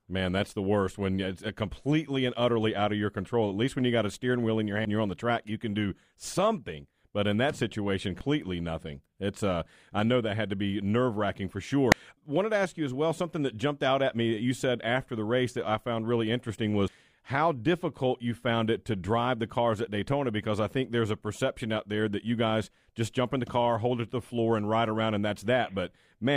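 Damaged data in a compressed stream causes four short blips in the speech, at 4.85, 8.21 (after "in that situation"), 11.92 (after "be nerve wracking for") and 16.88 s (after "I found really interesting"). Corrupted frames are misread by the decoder. Each brief blip then ends as sync returns.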